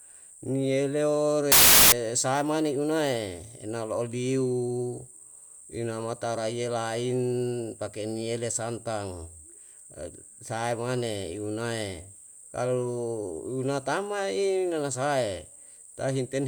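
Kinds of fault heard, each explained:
Samples built from the wrong bytes: from 1.52 to 1.92 s, misassembled sample bytes push the fast-changing low bits to the top, producing a burst of loud, harsh broadband noise over the speech.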